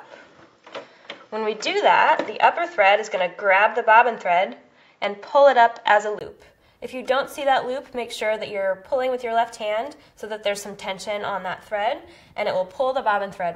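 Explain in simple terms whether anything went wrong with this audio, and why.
An input switched to a poorer device is the likely reason the first 6.2 seconds sound dull and boxy. During that stretch nothing above 7.6 kHz comes through, so the crisp top end is missing, and a faint background hiss sits underneath. At 6.21 s there is a very short gap of about 20 ms, then the sound suddenly opens up and gets brighter, with a noticeable change in loudness, as the better input takes over.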